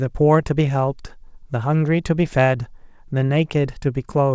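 No technical faults occur in this speech at any point, and it carries the narrowed top end of a wideband call codec, with nothing above 8 kHz.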